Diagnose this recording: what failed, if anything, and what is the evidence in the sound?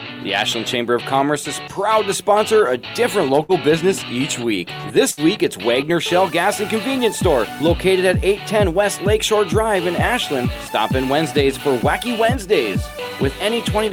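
The network stage failed with two bursts of packet loss, at 3.43 to 3.52 s and 5.11 to 5.20 s. Each time, concealment stretches and fades the last sound for about 54 to 62 ms, then playback resumes with roughly 60 ms skipped. Unlike a plain dropout, the gap is filled rather than silent, and material is lost.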